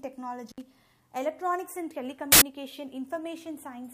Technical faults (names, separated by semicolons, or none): intermittent contact; uninitialised buffer